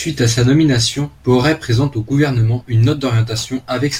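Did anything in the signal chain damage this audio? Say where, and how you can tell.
Yes. A crude rate conversion from about 0.93 s after "à sa" to the end picks nearest samples unfiltered, apparently 48 kHz to 44.1 kHz, adding gritty inharmonic fizz roughly 30 dB below the speech.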